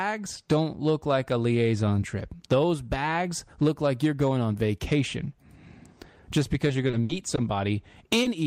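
Speech, with two packet-loss faults near the end. From 6.67 to 7.39 s there is repeated packet loss, giving a choppy, robotic sound. Audio keeps dropping out in several short holes, the longest about 60 ms. Each hole is patched by extending the last sound, so about a fifth of that stretch is filled-in rather than real. Then, at 8.23 to 8.27 s, a short concealed packet loss of 20 ms appears. The receiver bridges it by continuing the preceding sound and blending back, leaving a brief smear or wobble.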